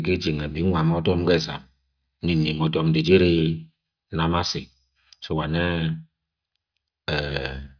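No technical faults are audible anywhere in the speech.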